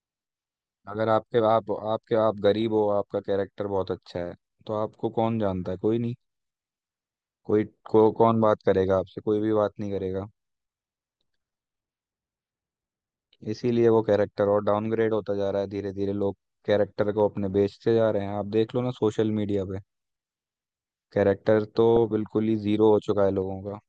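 DAB burbling occurs at 2.62–2.78 s, 17.54 s and 21.96 s: uncorrected bit errors corrupt MP2 samples and scale factors, putting short blips of noise into individual sub-bands and making sub-bands jump in level over the speech.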